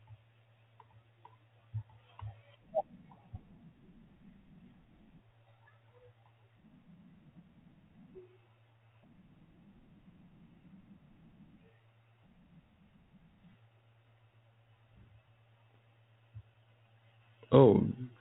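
Bit errors on an ADPCM link corrupt this speech clip twice, at 4.86 to 4.92 s and 15.71 to 15.76 s. A tiny fraction of flipped bits knocks the decoder's predictor and step size off track, so each error rings briefly as a rough pop with a momentary level jump, over narrowband telephone audio that fits G.726 at 32 kbit/s.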